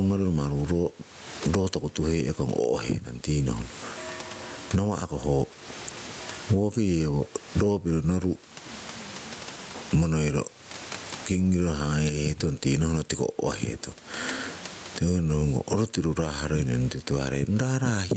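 Throughout the speech, gain pumping: loud and soft parts sit closer in level and sound squashed, with the gain swinging by around 25 dB, likely from excessive input gain with a fast limiter clamping peaks.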